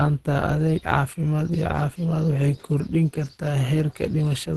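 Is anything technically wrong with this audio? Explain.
Yes. Throughout, the speech sounds muffled, hoarse and grainy, with nothing above 12.1 kHz. This is likely Opus compression at a low bitrate around 16 kbps in its hybrid speech mode, which narrows bandwidth and coarsens detail.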